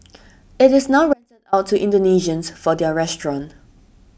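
Between 1.13 and 1.53 s the wanted signal was likely lost while the path after the break stayed live, causing an audio dropout to a faint residue. For about 390 ms the speech cuts abruptly to a faint sound roughly 35 dB down, then snaps back.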